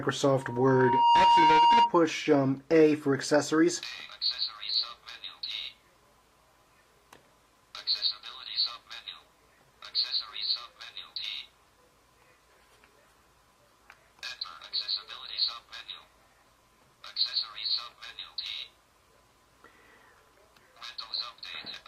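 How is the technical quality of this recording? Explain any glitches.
The recording has one clear fault, a loudspeaker feedback squeal from 0.33 to 1.95 s. A microphone picked up the loudspeaker it was feeding, and around 942 Hz the loop gain went above one, so that single tone kept reinforcing itself. It swells over a little under a second to roughly 10 dB above the surrounding sound. Unlike a steady interfering tone or hum, it starts quietly and grows on its own.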